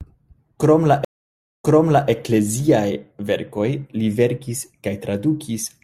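At about 1.05 s the speech drops out in what sounds like a stream reconnect: the connection broke and the player went quiet for roughly 0.59 s while it re-established the link. When it starts a fresh decoder mid-stream, the sound picks up about 0.46 s earlier than where it cut off, so you hear a short stretch repeated, likely because the server resent a burst of buffered audio. The whole disturbance is over by around 2.09 s.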